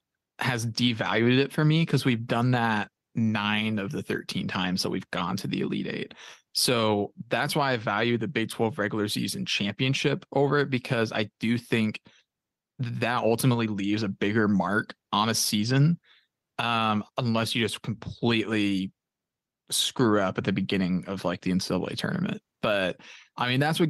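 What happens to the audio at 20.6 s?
At 20.6 s the clip is in the middle of gain pumping, which runs through the whole recording. The input gain is likely set far too high for the microphone, so a fast limiter or compressor keeps clamping the level down whenever the speech gets loud and releases it in the pauses. The gain therefore swings by roughly 10 dB, and the speech sounds squashed and breathing.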